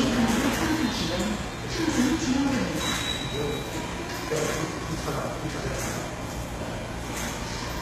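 Throughout, the treble sounds gritty and metallic, with nothing above about 14.9 kHz. This is likely HE-AAC compression, rebuilding highs by copying lower bands, at roughly 20 kbps.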